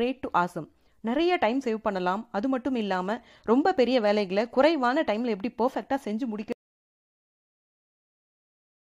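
At 6.52 s there is an audio dropout to silence. The speech cuts off mid-flow and never returns. The last 2.28 s are dead silent, with no room tone. The input was likely lost through a disconnected device, failed link or stray mute, while recording continued.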